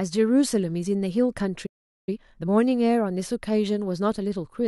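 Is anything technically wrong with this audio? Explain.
Yes, the speech has two connected playback faults.

Playback stall, 1.66 to 2.09 s: the output goes silent for 411 ms in mid-flow, then resumes. The likely cause is the player running out of buffered data or its audio thread being blocked, so nothing reached the output until it recovered.

Time-compressed catch-up, 2.09 to 2.49 s: right after the stall, the player clears its backlog by cutting small slices from the signal and cross-fading the remainder at 2× speed. The speech sounds hurried but keeps its normal pitch.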